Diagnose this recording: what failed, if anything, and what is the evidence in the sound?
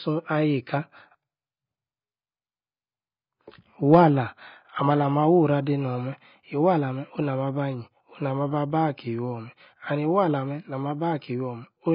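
The codec stage is where this went wrong, and it shows from start to finish: nothing in the speech above about 5.1 kHz, so it sounds dull and boxed-in, with heavy smearing and a fizzy, warbly edge on sibilants and held sounds. That's the likely work of AAC compression, probably AAC-LC, starved of bits. The encoder drops the top band and quantises what's left so coarsely that holes and swirly noise appear, which fits a bitrate around 16 kbps.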